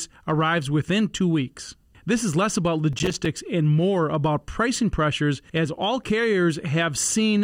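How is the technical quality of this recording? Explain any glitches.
The recording has one clear glitch, a burst of processor overload crackle between 2.93 and 3.38 seconds, just after "is less about" and before "and more about pricing". The processor fell behind and missed a run of buffer deadlines in a row. The crackle's fine grain fits buffers of around 5 ms, with something like fifteen missed. Each missed buffer left a short hole of silence with hard edges, so the sound breaks into a gritty, tearing crackle for almost half a second and clears once the load eases.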